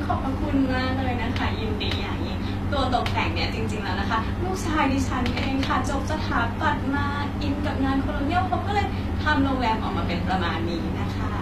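HE-AAC compression runs through the whole speech clip, with nothing present above 14.9 kHz. The treble sounds false, and sibilants come out gritty and lispy. That points to a low-bitrate encoder, likely HE-AAC at a rate that fits roughly 24 kbps. It codes only the lower spectrum and rebuilds the upper bands by copying lower content upward under a coarse envelope. The copied harmonics no longer line up with the real ones, so the damage is plainly audible.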